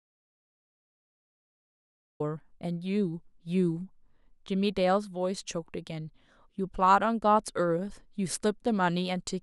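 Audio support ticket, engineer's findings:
Audio dropout to silence, 0.0–2.2 s, already under way at clip start. Silent, no room tone; speech enters abruptly at 2.2 s. Likely input loss upstream (disconnected device, failed link or stray mute) while recorder kept writing silence. Content in gap unrecoverable.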